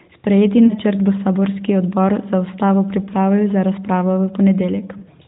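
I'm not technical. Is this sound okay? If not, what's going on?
No. Lost AMR speech frames at 0.66 to 0.74 s and 4.98 to 5.03 s: a phone radio link garbled about 40 ms each time, so the decoder stretched the previous sound and faded it, causing brief dips.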